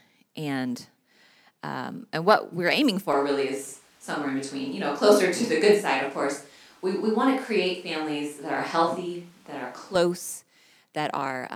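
From 3.1 to 9.95 s the speech abruptly turns roomy, hollow and bass-light at unchanged level, with room noise around 35 dB down. The sudden entry and exit point to a likely switch to a distant microphone, not gradual reverb.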